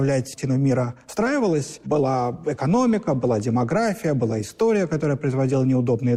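At 0.33 s comes a skip ahead: about a second of audio is dropped while later audio was already queued, so playback leaps forward with no gap. The waveform shows an abrupt splice, and the spectrogram shows a hard vertical seam where unrelated spectra meet.

From 0.49 to 2.74 s a jitter buffer speed-up follows. The receiver trims short pitch-period pieces repeatedly to shed excess delay, removing roughly a third of a second. The audio runs at 114% speed without any pitch change and sounds hurried. On a spectrogram, harmonics keep their spacing while events sit closer together in time.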